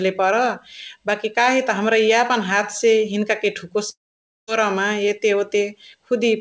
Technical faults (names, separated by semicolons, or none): long network dropout